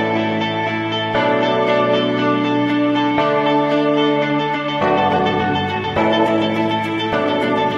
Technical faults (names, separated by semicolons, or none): time-stretched section